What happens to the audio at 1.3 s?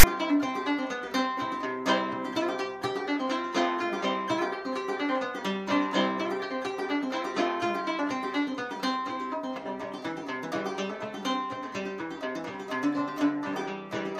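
Nothing goes wrong at 1.3 s: the audio carries on intact through that moment, with no dropout, glitch or distortion to be heard.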